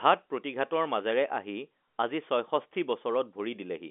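No faults: the speech carries the narrow G.711 telephone sound, a band of roughly 250 Hz to 3.5 kHz with nothing above about 3.7 kHz, and no defect is audible anywhere.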